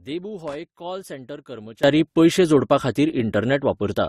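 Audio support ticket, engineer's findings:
Transcoding between lossy codecs, throughout. Likely an AAC-LC encode re-encoded to Opus, both near 48 kbit/s. Second codec spends bits on the first one's artefacts and adds its own. Speech carries the different coding artefacts of both codecs together.

Loose connector crackle, 0.48–0.56 s. Intermittent contact in a plug or jack making and breaking. Signal chopped for about 80 ms, giving a short irregular burst of scratchy crackle.

Sudden gain jump, 1.84 s to end. Digital gain stepped up between samples with no ramp, likely a setting or bit shift applied mid-stream. Speech and background noise rise together by about 19 dB and stay there.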